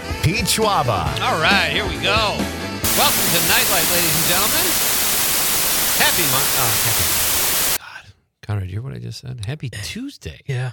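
From 2.84 to 7.77 s the signal drops to about 3 bits with dither, so a steady, even hiss about 5 dB louder than the audio appears, without distortion.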